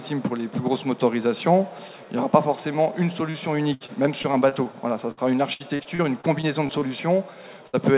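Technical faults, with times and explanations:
3.30 to 3.36 s, short concealed packet loss: about 40 ms of audio never arrived in time, so the receiver extended the preceding sound and blended back. This gives a brief smear. On a spectrogram the stretch looks smoothed and repetitive, while the surrounding sound stays capped at 4 kHz by the G.711 A-law path.
3.74 to 4.67 s and 5.11 to 6.83 s, repeated packet loss (robotic sound): 7 and then 9 gaps, the longest 64 and 66 ms, were each patched by continuing the last sound. About 18% of each span is concealed, roughly 170 ms and 300 ms. This makes the audio choppy with pieces missing. The waveform shows repeated short, regular-looking patches.
7.67 to 7.75 s, burst of packet loss: a 60 ms gap was filled by carrying on the last sound while turning it down, and 60 ms of real audio is skipped. On a waveform the level tapers through the patch. A spectrogram shows a held or fading pattern before the audio resumes further on.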